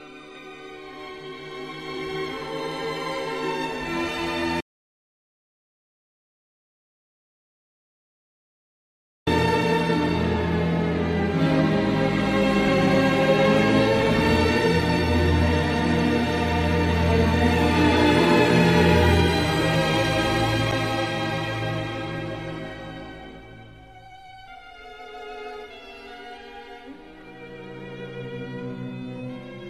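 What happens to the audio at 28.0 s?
Nothing goes wrong at 28.0 s; the audio continues intact through that moment.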